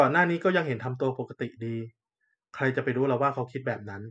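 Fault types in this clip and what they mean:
No technical fault can be heard anywhere in the speech recording.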